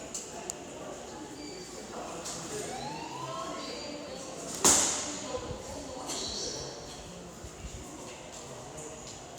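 No technical faults are audible.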